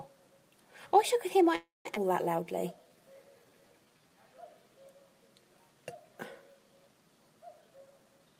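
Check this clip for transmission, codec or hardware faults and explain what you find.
Four transmission faults show up, all tied to how the call's packets arrived and were buffered.

From 1.55 to 1.87 s the sound stalls: the last fragment carries on as a fading buzz, then about 160 ms of silence, before resuming where it left off. This is a call audio freeze, likely from packets held up in transit so the jitter buffer ran dry and the receiver filled roughly 300 ms.

At 1.95 s the audio jumps forward abruptly, with the two sides spliced almost directly together. This is a skip ahead: about a fifth of a second of audio was dropped, probably to shed the delay built up by the freeze, since later packets were already waiting.

From 2.36 to 4.22 s everything drags, running at 89% speed with unchanged pitch and drawn-out sounds. This is a jitter buffer slow-down, where the receiver repeated single pitch periods or bits of pauses many times over, adding 220 ms to rebuild its reserve.

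From 7.61 s to the end the audio sounds hurried, at 125% speed with pitch intact. This is a jitter buffer speed-up: holding more audio than its target, the receiver cut short pitch-period pieces in rapid succession, removing roughly 200 ms.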